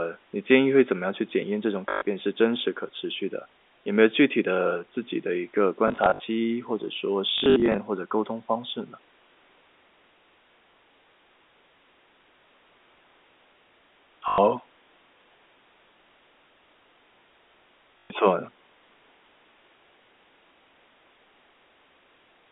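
At 1.9, 5.88 to 6.2, 7.38 to 7.78, 14.28 and 17.99 s, packet loss with the last packet repeated makes the speech stutter robotically, with a 50 Hz buzz that fits 20 ms packets. The waveform shows identical repeated segments.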